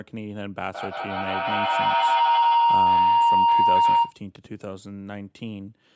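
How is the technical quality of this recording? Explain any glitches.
The recording has two clear problems: a sustained feedback howl over most of the first four seconds, and a pair of loud pops shortly after it ends. The call-style microphone processing limits the audio to nothing above 8 kHz.

From 0.68 to 4.21 s, a feedback howl rises over the speech as a piercing tone around 1 kHz, pulsing roughly every 150 ms and peaking about 14 dB above the voice. Microphone and loudspeaker were feeding each other, each pass louder than the last.

Between 4.36 and 4.48 s come two sharp pops in quick succession, a little louder than the speech around them, which continues underneath. These are likely voltage jolts, perhaps from a plug, switch, static or driver glitch, briefly shaped by the downstream circuitry.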